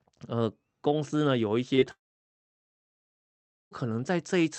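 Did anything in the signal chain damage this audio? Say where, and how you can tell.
Yes, it's at the network stage. Around 1.75 to 1.83 s there's short concealed packet loss, two back-to-back gaps of about 20 ms each. You hear a quick smear as the decoder stretches the last bit of sound to cover each hole, then blends back into the real audio.

Then there's a long network dropout from 1.91 to 3.73 s. The last sound carries on briefly as a fading buzz, then about 1.7 s of silence follows before the audio picks up again further along, with that stretch simply missing. A likely cause is the call losing packets for almost two seconds, with the audio cut off above 8 kHz on either side of it.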